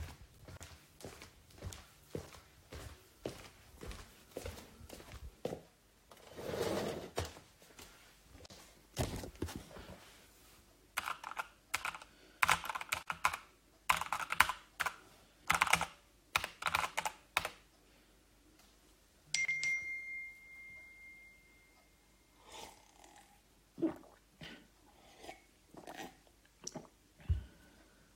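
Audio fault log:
0.57 s, 8.46 s, 13.03 s, 19.45 s: gap at a join of encoded pieces. Gaps of about 36, 42, 46 and 33 ms cut into continuous sound with smeared edges. Separately encoded segments were joined untrimmed, leaving encoder start delay and final-frame padding in place.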